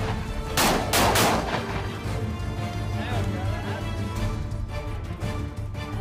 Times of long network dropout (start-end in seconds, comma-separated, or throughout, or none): none